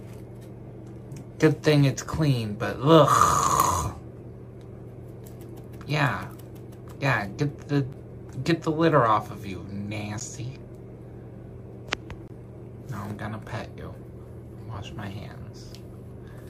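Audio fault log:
7.93 s, 10.20 s and 12.28–12.30 s: block of digital silence, three times. The audio drops straight to zero and comes back with no fade. The first two gaps last 10.7 ms and sound like sharp ticks. The third lasts 21.3 ms, twice as long, and sounds like a brief hole. These whole multiples point to an output buffer of 512 samples that was not filled in time.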